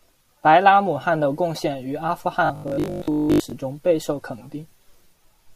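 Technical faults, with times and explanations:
2.46 to 3.52 s, robotic sound from repeated short buffers: after "献于阿富" the speech hardens into a rigid, metallic buzz locked at 50 Hz that only loosely tracks the speech, clearing by "中备受肯". This is likely a playback path starved of fresh audio, so the software kept looping the most recent fragment, which fits a chunk of about 20 ms. Most of this stretch is such repeats, and the looping imposes that fixed buzz pitch while the real audio in between is skipped.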